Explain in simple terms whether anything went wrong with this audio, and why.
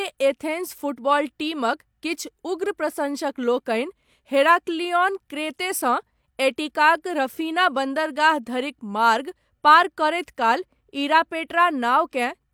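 Nothing went wrong here: the speech comes across just as it should, with no technical hiccups to point to.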